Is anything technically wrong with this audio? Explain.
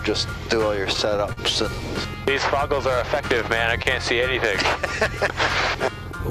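Yes, there are two network timing faults.

From 0.93 to 1.39 s there are repeated stalls (stutter). Packets kept arriving late, so the jitter buffer ran dry five times, and the receiver held the last sound for about 94 ms in total, up to 42 ms per gap. Unlike dropouts, nothing is lost; the audio drags and hiccups.

At 3.83 to 3.87 s there is a short stall from a late packet. One delayed packet forced the receiver to stretch the sound for 23 ms, then resume where it stopped. This single held moment with a slight buzz or dip is isolated rather than a rapid series.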